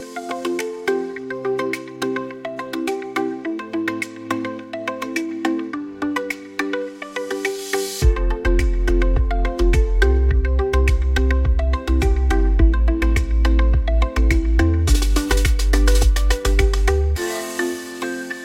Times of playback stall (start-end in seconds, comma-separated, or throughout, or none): none